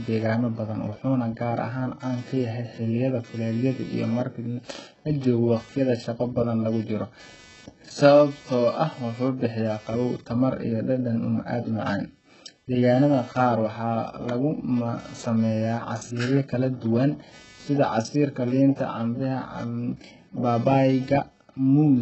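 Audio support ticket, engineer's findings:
Computer activity noise, throughout: buzz pulsing near 300 Hz, about 30 dB below the speech, tracking machine load rather than the talker. Shared audio ground disturbed by processor or graphics current draw.

HE-AAC compression, throughout: heavy codec damage, gritty metallic sibilants, nothing above 8 kHz. Likely from low-bitrate band replication, consistent with roughly 8 kbps, rebuilding treble that is inaccurate.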